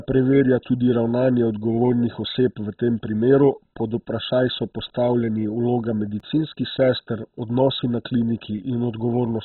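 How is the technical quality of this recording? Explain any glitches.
The technical quality is poor. Two faults are audible.

Throughout the clip the speech sounds dull and muffled, with a gurgling, granular roughness. Nothing is heard above 4 kHz. The likely cause is heavy MP2 compression at a very low rate, about 16 kbps. Starved of bits, the upper sub-bands are switched off and the remaining bands are coarsely quantised.

At 6.20 s there is a block of digital silence about 4.7 ms long. The sound cuts out abruptly and returns with no fade. Because the gap is so short, it is heard as a single tick, not as a hole in the speech.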